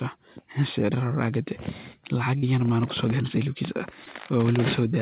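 Short concealed packet loss occurs at 2.38 to 2.44 s and again at 4.04 to 4.08 s. Roughly 40 ms and then 20 ms of the speech arrived too late to decode, so the receiver synthesised stand-in audio by extending the preceding sound before crossfading into the real signal. Each gap comes across as a brief smeared wobble within the narrowband speech, whose 4 kHz ceiling fits a G.711 call path.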